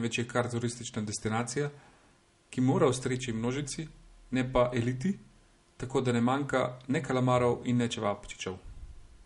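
From start to finish the speech has a watery, swirling quality, s sounds carry a metallic chirp, and nothing sits above 11.1 kHz, so the top end sounds dulled. This plainly audible damage is likely MP3 compression at a low bitrate, around 48 kbps. Short of bits, the encoder cuts the treble at a fixed point and drops quieter frequency detail, which flickers in and out between frames and produces the swirl and chirps.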